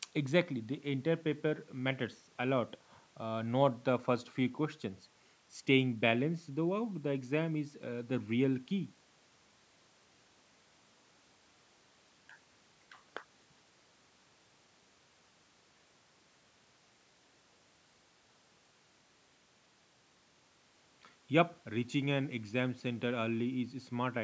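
Nothing stood out on listening to this speech recording, which has passed through a call's microphone processing with its usual bass roll-off and nothing above 8 kHz.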